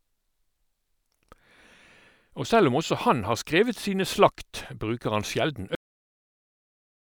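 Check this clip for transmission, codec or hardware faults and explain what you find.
One fault is present: a cut-off end. At 5.75 s the final buffers were never written or played, so the speech stops mid-sound and drops straight into digital silence with no decay.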